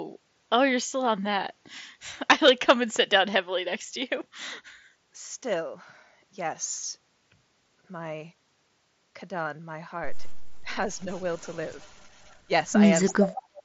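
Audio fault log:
10.65–10.73 s, speech suppressed in double talk: a brief, slight dip of around 5 dB while the far side was also talking, likely from the echo canceller turning everything down; the waveform envelope narrows for under a tenth of a second.
11.11–12.36 s, echo leak: a very faint delayed copy of the speech, about 35 dB below it, trailing by 336 ms, likely echo the far-end canceller failed to remove; the spectrogram shows ghostly repeats of the harmonic bands, offset in time.
13.07–13.25 s, echo leak: a much stronger return, only about 10 dB below the speech and again 336 ms late, likely the same residual echo breaking through, clearly visible as duplicated formant traces.
13.09–13.61 s, speech suppressed in double talk: about half a second of speech pushed down by roughly 25 dB, likely the canceller suppressing while the far side's sound played over the loudspeaker; the waveform nearly collapses.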